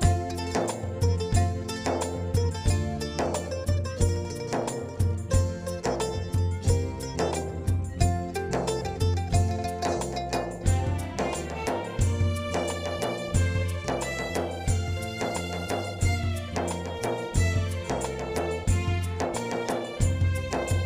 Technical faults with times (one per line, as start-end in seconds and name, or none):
none